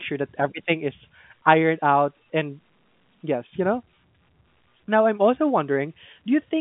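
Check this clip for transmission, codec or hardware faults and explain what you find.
No transmission, codec or hardware faults turn up anywhere in this speech clip. It carries the sound of G.711 telephone coding, with the speech held to a line band of roughly 150 Hz to 3.6 kHz and nothing above 3.8 kHz.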